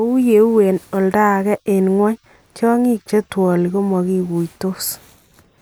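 Speech recording with no audible technical faults.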